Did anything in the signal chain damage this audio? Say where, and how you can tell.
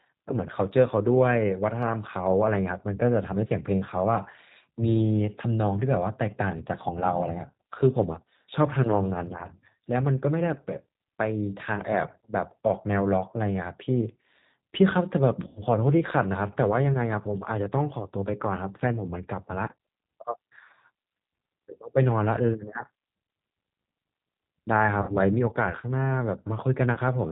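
Yes. At the codec stage, G.729 coding runs throughout, which fits 8 kbit/s. Nothing above 4 kHz survives. Pulse-built excitation makes the speech plainly rough and synthetic.

On the network, VoIP packet loss concealed by the speech codec occurs at 15.47 to 15.62 s, 25.02 to 25.17 s and 26.94 to 26.99 s. The decoder stretches the last sound into a buzzy tone or coloured noise that fades.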